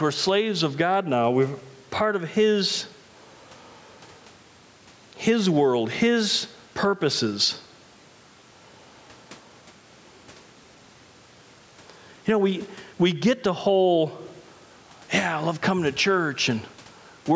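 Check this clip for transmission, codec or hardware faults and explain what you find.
One fault runs through the whole speech recording: gain pumping. The level swings by around 10 dB as gain is pulled down on loud sounds, likely from gain set far too high feeding a fast limiter. Loud and soft passages sit squashed close together, and the waveform envelope looks flattened with visible dips. The call microphone processing leaves nothing above 8 kHz on a spectrogram, and room noise sits about 43 dB below the speech.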